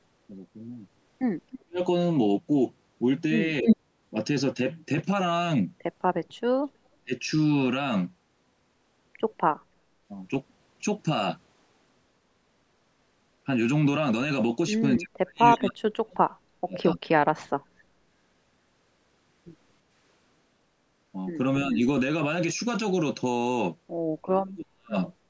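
The talker keeps getting pushed down in short holes, which is most likely speech suppressed in double talk. When both ends talk at once, the echo canceller can't tell the near voice from loudspeaker echo, so it turns everything down. It happens at 1.54–1.79 s, 3.61–3.67 s, 7.05–7.12 s, 14.97–16.79 s, 16.96–17.00 s, 21.68–21.79 s and 24.23–24.96 s. The first, fourth and last are deep, nearly silent gaps, and the 15–17 s one lasts about a second and a half. The others are brief, shallow dips.

Right after the 3.6 s dip, at 3.66–3.77 s, there's a short echo leak. A scrap of voice comes back about 309 ms late, at roughly 5 dB relative to the speech. The far end's loudspeaker echo likely slipped past its canceller and got sent back down the line.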